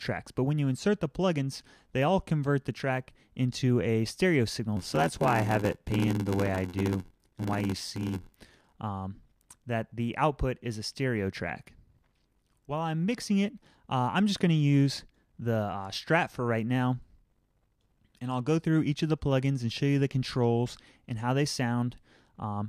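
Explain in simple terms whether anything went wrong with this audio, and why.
Between 4.76 and 8.75 s there is a block size mismatch (padded). One stage handed over audio in chunks shorter than the next stage expected, which fits it reading 512-sample blocks, and the shortfall in each block was filled with silence. Those tiny gaps repeat about 86 times a second, producing a steady buzz, and the sound drags to roughly 86% of its proper speed. Unlike a sample-rate mismatch, the overall character of the sound stays the same while the timing slows.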